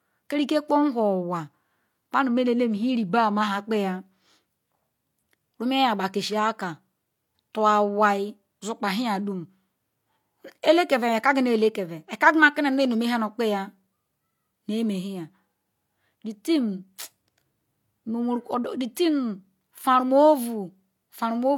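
Throughout the speech there is a smeared, watery compression texture, and nothing above 18.5 kHz. This is likely low-bitrate audio saved at a high bitrate. The damage fits an HE-AAC encode near 40 kbit/s, re-saved as MP3 around 192 kbit/s, which cannot restore what was lost.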